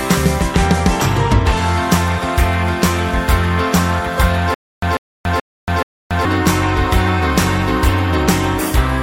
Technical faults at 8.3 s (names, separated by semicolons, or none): none